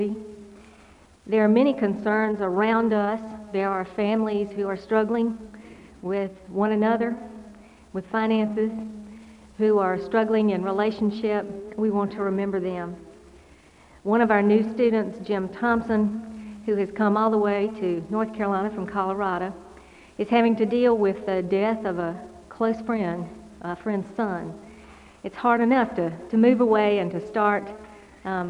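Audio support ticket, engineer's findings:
No faults found on listening; nothing to action.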